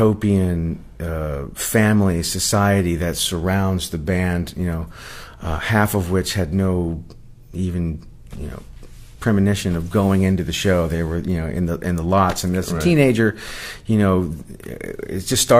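No technical faults heard anywhere in the recording.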